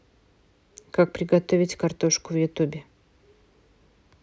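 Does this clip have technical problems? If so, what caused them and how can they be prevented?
No, nothing technical trips it up; it's just speech coming through with no faults to point to, so there's nothing here that needs preventing.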